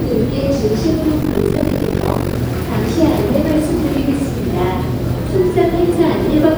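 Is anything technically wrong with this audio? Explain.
Yes. From 1.22 to 2.39 s the sound turns into a rough flutter, pumping around 50 times a second with swings of about 60 dB. This is overlap-add ripple: windowed frames were rejoined with uneven overlap gains, so the level dips once per frame.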